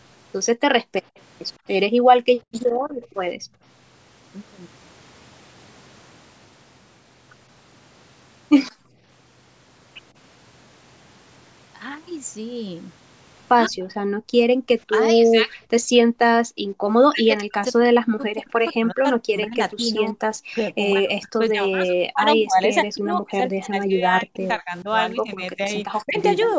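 From 0.8 to 3.62 s, the room background is gated by the echo canceller. It clamps the microphone while the far end plays, so the ambience drops by up to about 40 dB. The gaps add up to about a second and a half.

At 1.16 to 1.2 s there is an echo leak. A very faint copy of the speech returns about 153 ms late, far below the talker's level. The likely cause is residual loudspeaker pickup that the canceller failed to remove.

The background is gated again at 8.71 to 8.99 s, dipping by up to about 37 dB. It returns once the canceller lets go.

From 13.68 to 15.5 s, the talker's speech is suppressed in double talk. Its level sinks by around 25 dB during the overlap. This is likely the canceller mistaking it for echo. Between 14.12 and 16.62 s, the background is also gated, by up to about 40 dB, for around half a second in total.

From 17.01 to 26.17 s, double-talk suppression returns more severely. 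The speech drops in and out by up to roughly 40 dB, and about five seconds of it are cut down in pieces.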